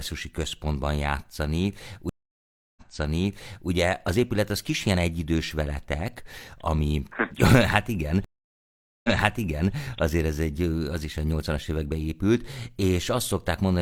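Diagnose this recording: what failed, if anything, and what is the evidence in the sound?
Stream reconnect at 2.09–3.69 s and 8.24–9.74 s, a network-stage failure. After "központban játszani" the speech drops out for 0.67 s, then resumes 0.93 s earlier at "az épület az kis". At 8.24 s it goes silent for 0.8 s and repeats 0.7 s before "azért ez". Each time the player reconnected and restarted its decoder mid-stream, and the server resent a burst of already-played audio.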